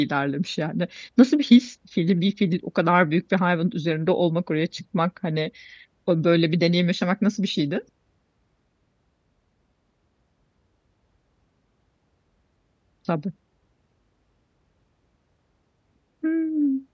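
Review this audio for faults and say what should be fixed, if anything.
No faults can be heard in this audio, so nothing needs to be fixed.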